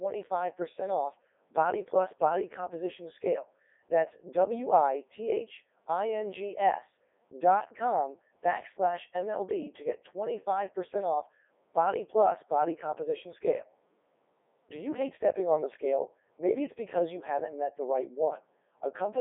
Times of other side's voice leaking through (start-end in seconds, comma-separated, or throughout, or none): none